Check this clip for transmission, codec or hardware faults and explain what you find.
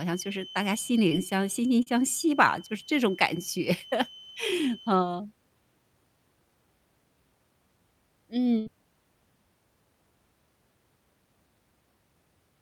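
Three kinds of fault show up in this speech clip: a thin whistle early on, two brief dropouts, and one longer gap.

Feedback whistle, 0.0 to 5.04 s: a thin 3 kHz tone that slowly swells and fades sits about 20 dB under the speech, likely from a loudspeaker-to-microphone loop held right at the edge of feedback.

Short concealed packet loss, 1.09 to 1.13 s and 1.83 to 1.88 s: brief smears where audio never arrived (20 and 40 ms), and the receiver filled the holes by extending the preceding sound.

Burst of packet loss, 8.58 to 8.68 s: a held, fading stretch, then speech resumes further on, because about 80 ms went missing and the receiver stretched the preceding sound across the gap.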